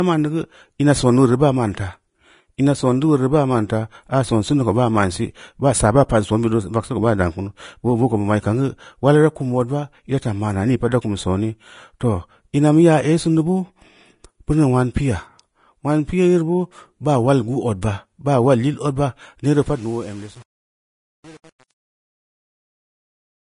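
Throughout the speech, the treble is grainy and hissy, with nothing above 10.5 kHz. Consonant detail has turned into noise-like texture, and the codec damage is plainly audible. This is likely Vorbis compression at a low setting, which fits a bitrate of around 30 kbps. The encoder keeps a smooth spectral envelope but quantises the fine structure on top of it so coarsely that high-frequency detail is replaced by noise of similar energy. It also removes everything above its cut-off.

At 17.81 s, a sharp onset is preceded by a brief smear of hiss lasting about 12 ms. This is pre-echo. The transform block containing the attack spreads its quantisation noise across its full length, so noise sized for the loud onset also fills the quiet moment just before it. The attack itself sounds softened. The same thing happens again at 21.59 s, with the same 12 ms spread of hiss ahead of the onset.

From 19.44 s to the end, the audio fades out with truncation distortion on the fade. 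The gain stage drops the low-order bits without dither, and the resolution points to roughly 7 bits. As the level falls toward the smallest step, the waveform collapses into coarse staircase shapes, and the distortion is at its worst across this whole stretch to the end. The tail sounds gritty and rough instead of fading cleanly.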